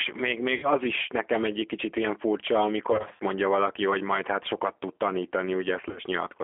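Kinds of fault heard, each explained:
G.729 codec: The whole speech clip runs through a low-rate 8 kbit/s VoIP codec that doesn't store the waveform. It rebuilds each short frame from a vocal tract filter, a pitch predictor and a handful of pulses. The damage is plainly audible: the voice sits on a narrow phone line of about 300 Hz to 3.4 kHz, and it comes out slightly rough and synthetic.
VoIP packet loss concealed by the speech codec: Three stretches have missing packets, and the decoder papers over them by stretching its last pitch and filter while fading the gain. From 0.54 to 0.70 s about 90 ms of audio is gone. From 2.92 to 3.20 s about 140 ms drops out in patches over 280 ms, with runs up to 40 ms. From 5.89 to 6.03 s about 70 ms drops out over 100 ms, with runs up to 30 ms. Each gap is stretched into a buzzy tone or a coloured noise that fades.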